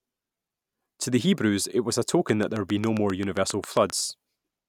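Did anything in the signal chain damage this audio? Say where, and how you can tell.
Yes. A train of clicks runs from 2.29 to 3.91 s, a regular ticking at about 7.5 clicks per second, roughly fifteen near-identical pulses peaking about 10 dB above the speech and audible in the pauses as well. The stage is likely the analogue wiring or interface, with nearby equipment or a struggling interface injecting a repeating pulse into the signal. Because the pulses sit on top of the recording rather than replacing it, they tick steadily over the speech and never interrupt it.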